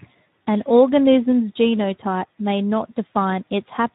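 Speech, damaged throughout by the Speex codec. The voice sounds noisy and hoarse from too few excitation bits. The plainly audible damage fits a setting around 11 kbps.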